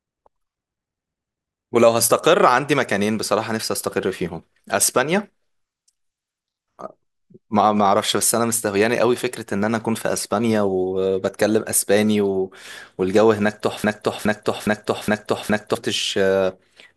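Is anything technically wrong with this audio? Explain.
Yes. A broken-record loop runs from 13.84 to 15.75 s: the stream likely stalled and kept resending its last held fragment, so a 414 ms slice of speech repeats exactly five times back to back, and the speech that belonged there is lost.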